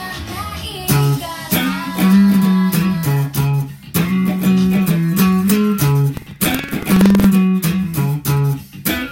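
From 6.13 to 7.26 s, buffer tearing: writer and reader cross mid-period, splicing older audio into each buffer, giving a steady 21.5 Hz rattle that fits a 2048-sample buffer, unlike sporadic clicks.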